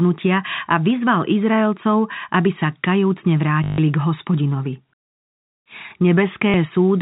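Packet loss with last packet repeated occurs at 3.64 to 3.78 s, just after "aby sa kajúcne", and again at 6.50 to 6.54 s. Audio was lost for 140 ms and then 40 ms, and the receiver filled each gap by replaying the last chunk it had. The repeats fall out of step with the pitch, and the longer gap gives a robotic stutter buzzing at about 50 Hz, which fits 20 ms packets, heard through the 4 kHz telephone band of G.711.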